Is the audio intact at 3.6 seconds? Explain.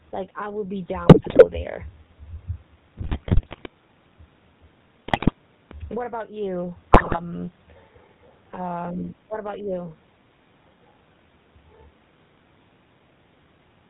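No. At 3.6 s the audio sits inside a burst of GSM bit errors running from about 2.98 to 3.68 s. Corrupted bits reach the speech decoder, so the filter, pitch and gain parameters it rebuilds are wrong for a run of consecutive frames. The spectrum bends and the level jumps from frame to frame, and the speech breaks into squawks, pops and gargling. That many flipped bits points to a weak radio link.

Underneath that burst, and across the whole clip, is the GSM full-rate codec. It models the vocal tract and excites it with regularly spaced pulses that keep only every third sample of the excitation. Nothing above 4 kHz gets through. The result is a buzzy, gravelly roughness that is plainly audible here, and it fits the 13 kbps full-rate coder. At 3.6 s this band-limited, rasping texture is what the bit errors are damaging further.

The level also pumps at this point, as it does throughout. The background sits about 40 dB below the speech, and the gain swings by around 10 dB. 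Loud and soft passages end up squashed toward the same level. The likely cause is a fast limiter or compressor clamping down on gain that was set far too high for the microphone.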